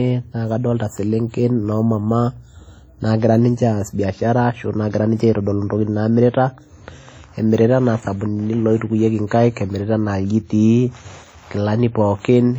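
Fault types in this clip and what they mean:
WMA compression: heavy ringing, washy smearing and breathing hiss throughout the speech, likely a WMA encode near 32 kbps; the spectrogram shows smeared energy with holes where weak components vanished.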